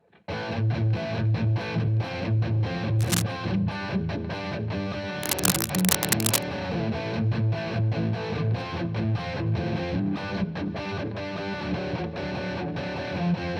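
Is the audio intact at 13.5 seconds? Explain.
Yes, the audio at 13.5 seconds is intact, with no dropout, click, distortion or other fault at that moment.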